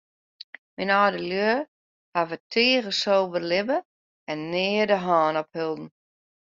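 No technical faults detected.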